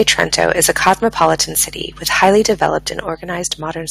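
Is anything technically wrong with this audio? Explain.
Yes. The speech has two faults: microphone overload and microphone volume stepped down.

Microphone overload appears four times. It runs from 0.00 to 0.93 s, about 8 dB over full scale. It returns at 1.21 to 1.31 s (about 5 dB), 2.22 to 2.28 s (about 4 dB) and 2.62 to 2.67 s (about 2 dB). The likely cause is input gain set too high. The loudest peaks hit the converter's ceiling and get flattened. Only a few percent of samples are affected. Still, the loud syllables gain a harsh, crackly edge.

Microphone volume stepped down happens twice. The first step is at 0.89 s, a drop of about 2 dB, right at the end of the first overload. The second is at 3.09 s, a drop of about 5 dB. Each time, speech and background fall together in one sudden step. Nothing fades in or out. This likely comes from call software cutting the device's input volume after detecting clipping.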